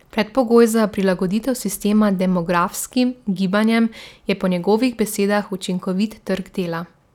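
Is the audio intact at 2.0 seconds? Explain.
Yes, at 2.0 seconds the speech runs through intact with no fault audible at that moment.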